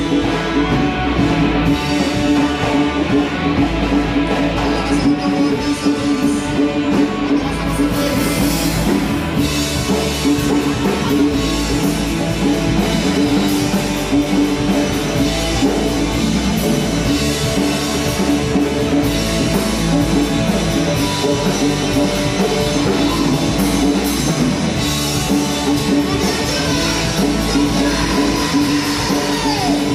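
No dropouts, glitches, distortion or level problems turn up anywhere in the audio.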